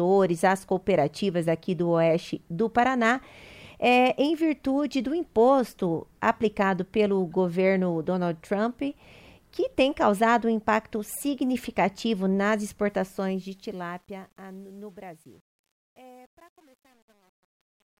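At 12.89 s, as the fade-out begins around 13 s, truncation distortion on a fade sets in. The fade drops too many bits and adds no dither. This fits a 9-bit stage. From 14.02 s to 18.0 s, the quiet tail turns gritty.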